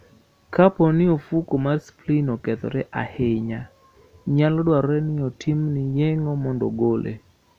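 No technical faults can be heard anywhere in the recording.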